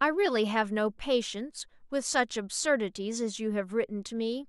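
Speech recording with no technical faults audible anywhere in the clip.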